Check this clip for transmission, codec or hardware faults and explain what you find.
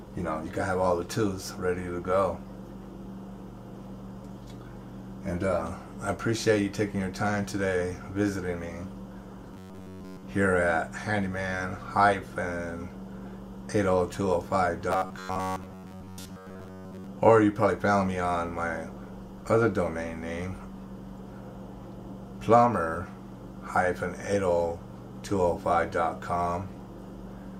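Two episodes of robotic sound from repeated short buffers occur, at 9.54–10.23 s and at 14.91–17.09 s. In both, the audio turns into a rigid, metallic buzz pitched at 93.8 Hz that only loosely tracks the underlying sound. The likely cause is audio arriving too seldom, with the playback side repeating a recent slice of roughly 10.7 ms to fill the gap. This suggests a buffer of about that length. Most of the real audio in these stretches is skipped and replaced by repeats.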